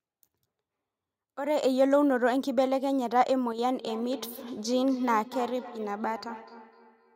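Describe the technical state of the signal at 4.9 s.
At 4.9 s the signal carries feedback echo between two devices, present from 3.78 s to the end. A second device replays this speech into a nearby microphone, returning it roughly every 300 ms at up to about 16 dB below the speech, thinner and ringing.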